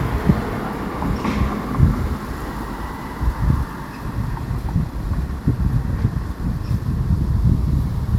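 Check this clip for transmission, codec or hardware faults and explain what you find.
No transmission, codec or hardware fault can be heard anywhere in the recording, and the signal stays continuous and stable throughout.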